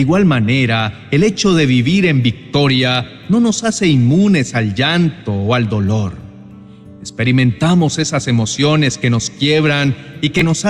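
Near the very end, from 10.39 to 10.42 s, there is a brief Bluetooth stutter. The wireless link failed to deliver audio in time, so the receiver filled the gap by replaying the slice it already held. That repeat gives a short catch in the sound. When playback resumes, roughly 14 ms of material is simply missing, which points to a single lost packet. The sound picks up slightly further along.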